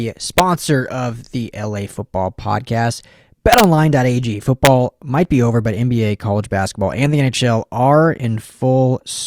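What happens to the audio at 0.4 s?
Integer overflow at 0.38 s, just before "of the". A peak pushed about 1 dB past the largest integer value, and instead of being limited the sample wrapped to the opposite sign, jumping across the full range. It is heard as a brief, violent crack, far sharper than clipping.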